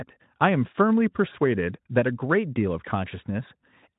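Nothing in this speech recording stands out as a technical fault; it all holds together the way it should.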